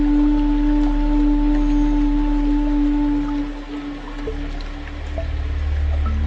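No technical faults can be heard anywhere in the audio, with no interruptions, distortion or level problems at any point.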